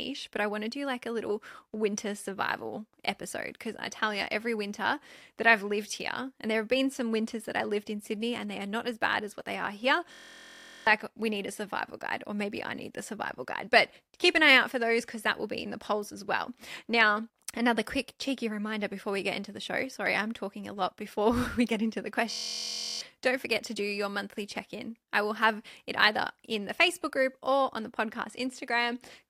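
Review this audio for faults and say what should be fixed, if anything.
A steady buzz near 43 Hz replaces the speech from 10.12 to 10.87 s, after "what they are here", and again from 22.31 to 23.01 s, after "we get into the". This is a system hang loop. While the system stalled, the output hardware kept replaying the same 23.22 ms slice of its ring buffer, which fits a 1024-sample buffer. Roughly 0.7 s of audio is lost each time. To prevent it, find and fix the driver or process stall, and have the audio path output silence instead of recycling the buffer when new data stops arriving.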